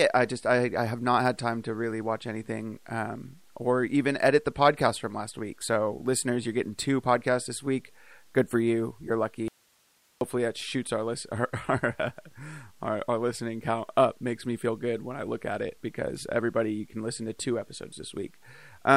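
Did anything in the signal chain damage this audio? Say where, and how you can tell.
Yes. The signal chain most likely lost its source at the analogue wiring stage, a connection breaking ahead of a path that stayed live, producing an audio dropout to a faint residue. The speech cuts out abruptly at 9.48 s and returns at 10.21 s, just before "that shoots our list", leaving a gap of about 0.73 s. That gap holds only hiss about 40 dB below the speech, the noise of an open input rather than a pause or fade.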